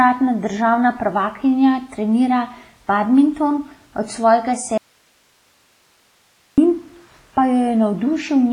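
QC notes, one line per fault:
throughout: WMA compression. The speech has a ringing, washy quality, with hiss that swells and sinks along with the voice rather than sitting at a steady level. There is nothing above 10.1 kHz, which points to a low bitrate around 24 kbps. The likely cause is a long-block transform encoder that spreads quantisation noise over tens of milliseconds around each sound and zeroes weaker spectral lines, so consonant detail blurs and the top end is removed.
4.78–6.58 s: audio dropout to a faint residue. The speech cuts off abruptly for about 1.8 s and returns just as suddenly. Throughout the gap only a low hiss remains, far below the speech level, with none of the gradual decay of a natural pause or fade. The likely cause is a loss of the wanted signal upstream while the path after the break stayed live, so its own noise floor carried on through the gap.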